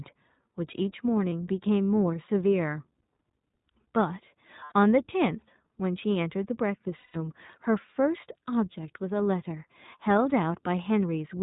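Throughout, the iLBC codec keeps the speech narrowband, with nothing above 4 kHz, and slightly rough and synthetic; the plainly audible damage fits its 15.2 kbps, 20 ms-frame mode. Lost iLBC frames at 1.30–1.32 s, 4.64–4.72 s and 6.98–7.16 s (20, 80 and 160 ms) come out as a held, buzzy vowel that fades over the longest gap, not silent dropouts, and the voice recovers immediately after each one.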